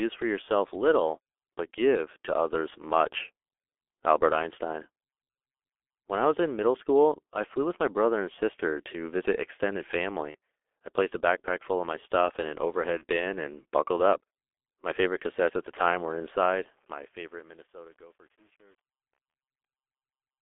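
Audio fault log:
throughout, G.723.1 codec: The speech sounds muffled and hoarse, with smeared consonants and nothing above about 3.5 kHz or below about 300 Hz. The heavy coding damage fits G.723.1 at 6.3 kbit/s. The codec models the voice in 30 ms frames and updates that model slowly, so quick changes in consonants blur together.
10.31–10.36, 12.98–13.04, 19.31–19.34, VoIP packet loss concealed by the speech codec: Each time there is a brief smear where the voice is stretched and fades, then recovers slightly late. The first comes after "sister to visit extended" and before "I placed a backpack", and the second between "my stuff in an" and "bin and buckled up". The third comes near the end. Each fits a single lost 30 ms frame. The decoder filled each gap by extending its last pitch and filter at falling gain, and because each frame builds on the previous one, the distortion carries a little past the gap.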